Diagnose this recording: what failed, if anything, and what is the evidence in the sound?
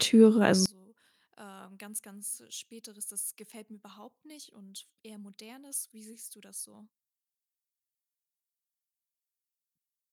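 From 0.66 s onward the speech collapses to a faint residue, about 26 dB down in mono, likely one channel inverted by reversed wiring polarity.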